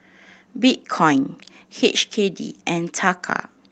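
No technical faults can be heard in the speech, whose band stops at 8 kHz as expected after call microphone processing and a WebRTC call path whose coding fits Opus at 32 kbps, with only that codec's usual coding noise.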